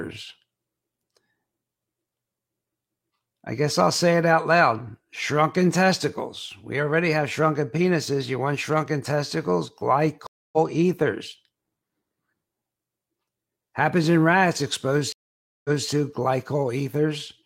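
Stream reconnects at 10.27–10.58 s and 15.12–15.88 s: the connection dropped, playback went silent, then a fresh decoder restarted mid-stream. The first gap lasts 260 ms and resumes about a fifth of a second later, skipping audio; the second lasts 521 ms and resumes 232 ms earlier, repeating material.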